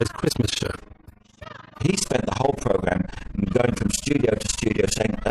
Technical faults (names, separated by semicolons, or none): overlap-add ripple